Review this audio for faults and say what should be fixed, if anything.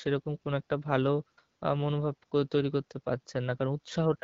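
Nothing stood out on listening, and the speech carried over the wideband HD Voice link needs no fixing.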